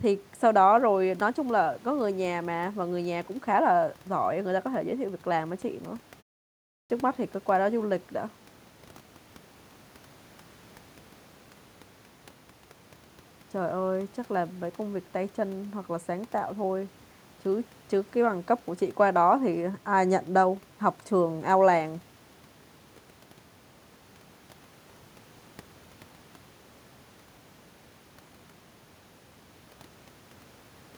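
At 6.61 s the audio comes back from a pause of about 0.47 s with its opening missing: a clipped start after a pause. The output path appears to have dropped into a low-power or unlocked state during the gap and took roughly 290 ms to resume, so everything up to 6.90 s is swallowed. The speech re-enters abruptly from silence, mid-sound, with no onset.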